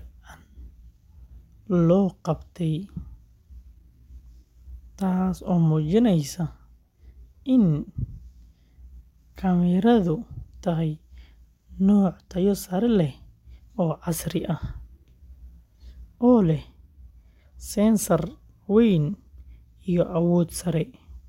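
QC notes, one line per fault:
No faults were found in this speech clip. There is nothing to log for it.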